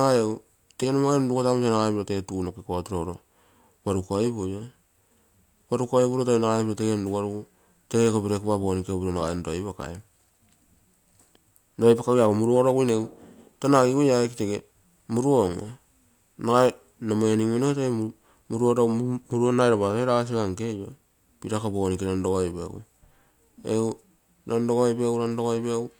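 A speech recording with nothing technically wrong to report.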